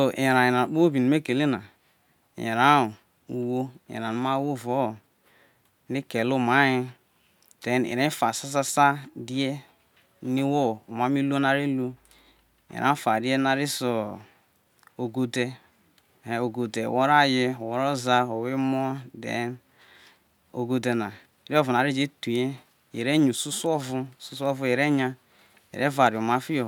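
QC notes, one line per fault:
No fault found in the clip.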